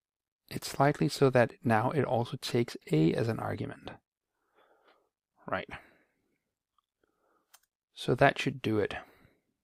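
DAB burbling appears from 2.81 to 2.84 s. Weak reception let a low rate of bit errors, around a tenth of a percent, slip past error correction into the MP2 data, so wrong samples put short blips of noise into individual sub-bands, giving a brief burst of noise blips.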